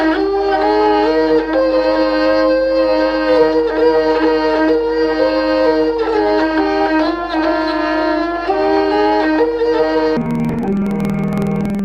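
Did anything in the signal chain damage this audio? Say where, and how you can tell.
Yes. Interleaved audio read as planar appears from 10.17 s to the end at 11.84 s, a sample-format conversion fault. Each 46.44 ms block, which fits a 2048-sample buffer, has its alternating left-right samples split into halves. The sound drops an octave, doubles, and chops at 21.5 Hz.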